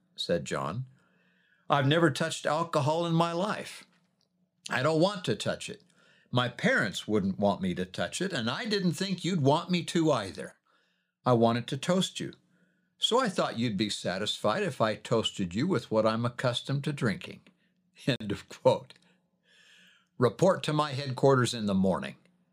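At 18.16 s the speech drops to silence for about 45 ms, then resumes. That's likely a Bluetooth stall, where delayed packets let the headphones' buffer run dry.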